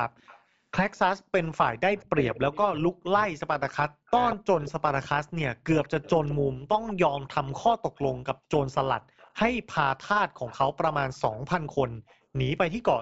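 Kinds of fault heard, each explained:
overlap-add ripple: The level swells and sinks by about 6 dB around 200 times a second, all through the clip. This gives a metallic buzz with extra tones around each note. Frames were rejoined with an overlap whose windows do not add up to a steady gain.
echo leak: A copy of the speech trails it by about 180 to 200 ms, in six stretches from 0.17 s to 12.82 s. It sits about 10 to 35 dB below the speech. The likely cause is an echo canceller missing part of its loudspeaker pickup.
speech suppressed in double talk: Between 1.96 s and 7.47 s the speech drops away in pieces, about three seconds in all, at worst by around 40 dB. Both sides likely talked at once, and the canceller turned down the talker with the echo.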